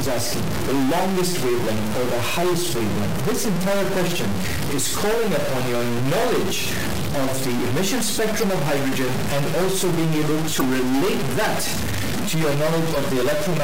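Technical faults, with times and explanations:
Throughout, stuck bit: a distortion sits on all of the audio, and the pauses are filled with noise rather than silence. The likely cause is one data bit held at a fixed value by a broken line or converter. That pushes roughly half the samples off by that bit's weight in a waveform-dependent pattern, and the error changes with the sign of low-level values.
8.39 s, 10.57 s and 12.93 s, damaged data in a compressed stream: each is a brief chirp or blip of about 40 ms. Corrupted bytes in the compressed stream make the decoder misread those frames and lose sync. It then hunts for the next valid frame header, leaving a short garbled burst.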